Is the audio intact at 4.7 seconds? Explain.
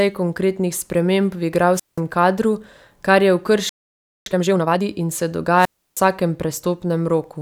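No. A time-compressed catch-up runs from 4.26 to 4.82 s. Small pieces are cut and cross-faded at 2x speed. The speech sounds hurried, at normal pitch.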